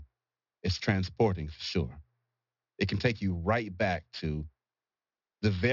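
Sibilants in this speech sound gritty and metallic from start to finish, with harsh energy running right up to about 6 kHz. That is aliasing: high frequencies were not filtered before a drop to a 12 kHz rate, which fits the fold at 6 kHz, and they reflect back fairly loudly.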